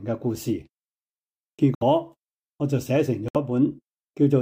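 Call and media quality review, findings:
Corrupt frame muted, twice. Abrupt silent gaps at 1.75–1.83 s and 3.28–3.36 s, each about 80 ms. Component: decoder and player concealment. Damaged compressed frames were rejected and replaced with silence. Each gap fits roughly three frames of about 26 ms. Timing holds: the sound resumes at the expected point.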